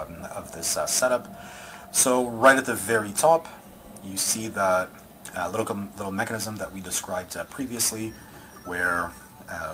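No technical faults are audible anywhere in the audio.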